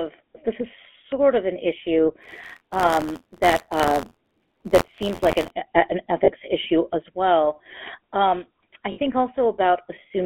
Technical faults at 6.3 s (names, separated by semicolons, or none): GSM full-rate codec; lost GSM frames